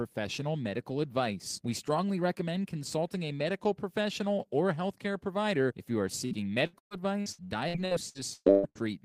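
From 6.25 s to 8.84 s, right after "provider if you are", the stream suffers repeated packet loss (robotic sound): audio packets keep going missing or arriving too late, more than a dozen times in quick succession. The receiver fills each hole by stretching the last sound it had, covering roughly a third of the stretch, with the longest gap about 123 ms. The result is choppy, robotic speech with fragments dropped out.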